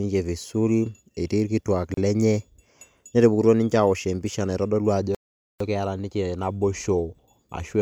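A gap at a join of encoded pieces opens at 1.94 s and lasts about 33 ms, to 1.97 s. Separately encoded segments were spliced untrimmed, so encoder start delay and final-frame padding leave a short silence with smeared edges, after which speech resumes where it stopped.

A playback stall follows from 5.15 s to 5.60 s, a silence of about 0.46 s between "awosh empisha naitodolu ajo" and "keeta ninche naboisho". The player likely ran out of buffered data or was briefly blocked, halting output mid-flow before continuing.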